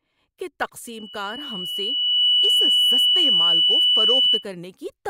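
At 0.87 s a loudspeaker feedback squeal begins: the microphone is picking up the loudspeaker it feeds, and at 3 kHz the loop gain tops one, so that tone feeds on itself. It swells over roughly a second and a half to sit about 15 dB above the speech, then stops at 4.45 s. Unlike a steady interference whistle or test tone, it starts faint and grows on its own.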